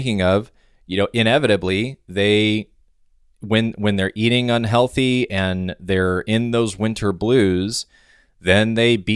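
No technical faults can be heard anywhere in this speech recording. Nothing in it calls for a timestamp or an account of something going wrong.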